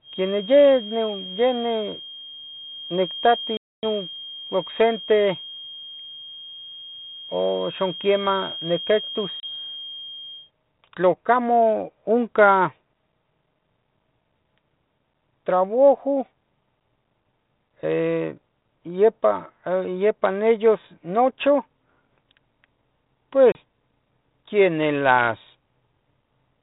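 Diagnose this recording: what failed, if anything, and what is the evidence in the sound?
Feedback whistle, 0 to 10.5 s: a thin 3.2 kHz tone sits well below the speech, swelling and fading slowly. The likely cause is a loudspeaker-to-microphone loop hovering at the edge of oscillation.

Packet loss on an ADPCM call, network stage: hard silent gaps at 3.57–3.84 s (260 ms), 9.40–9.44 s and 23.52–23.57 s. The G.726 decoder's predictor and step size then fall out of step with the sender's.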